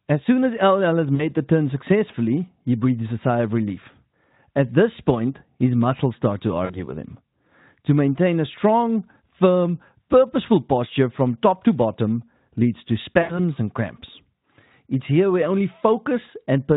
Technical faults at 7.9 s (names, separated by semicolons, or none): none